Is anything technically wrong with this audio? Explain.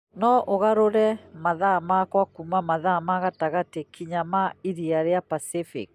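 No, nothing technically wrong turns up anywhere in this speech recording, so there's nothing here to flag.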